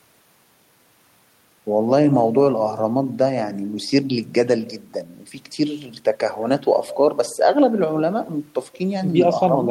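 There are no technical faults to describe at any point in the audio.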